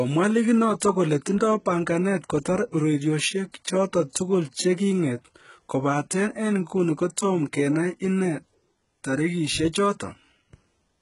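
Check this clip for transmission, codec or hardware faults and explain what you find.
There's one fault, and it runs through the whole clip: heavy HE-AAC compression is the likely cause. The treble over the speech is a rebuilt copy of lower bands, so sibilants sound gritty and metallic, nothing sits above 11.1 kHz, and the damage fits a very low bitrate near 12 kbps.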